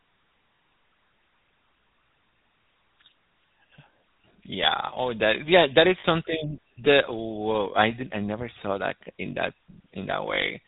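The whole clip carries GSM full-rate codec damage, plainly audible. The speech sounds buzzy and gravelly. Nothing above 4 kHz survives. The codec rebuilds the voice from a vocal-tract model driven by sparse pulses, and this coarse excitation gives the roughness. The damage points to a 13 kbps link.

At 0.54 s, lost GSM frames break the speech for 60 ms, until 0.6 s. At 6.0 s, just after "that is", a 40 ms loss runs to 6.05 s. In each gap, the last good frame is replayed. This gives a brief metallic ring instead of silence.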